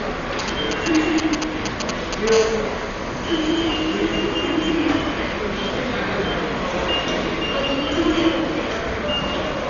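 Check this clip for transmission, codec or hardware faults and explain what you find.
Two faults here. Throughout, the audio is dull with nothing above 7 kHz and rough, fluttering noise, likely Dolby Digital compression starved of bits, consistent with roughly 40 kbps.

From 0.39 to 2.29 s there are GSM signalling bursts: a nearby phone's radio pulses get rectified into galloping ticks and 217 Hz buzzes, about as loud as the sound itself.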